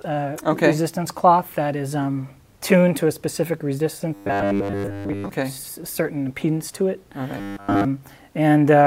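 From 4.14 to 5.29 s and again from 7.38 to 7.85 s, the sound becomes a rigid, metallic 100 Hz buzz: robotic sound from repeated short buffers, likely from a stalled feed looping about 10 ms of audio, most of the first stretch and all of the second.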